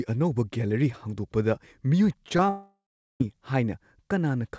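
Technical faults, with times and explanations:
2.29 to 2.31 s, 2.37 to 2.39 s and 2.47 to 2.49 s, short concealed packet loss: about 10 ms of audio goes missing in each window. The decoder extends the preceding sound to bridge each gap, so these come across as brief smears or wobbles, repeating roughly every 0.1 s.
2.49 to 3.21 s, long network dropout: immediately after the third short loss, the audio stops for about 0.7 s. The decoder keeps extending the last sound as a fading buzz or hiss, which gives way to about 0.4 s of silence. The likely cause is a network stall, and that stretch of audio is lost. Sound then resumes, still band-limited below 8 kHz by the G.722 call codec.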